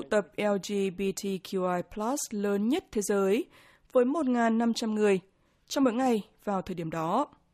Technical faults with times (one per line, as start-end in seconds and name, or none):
none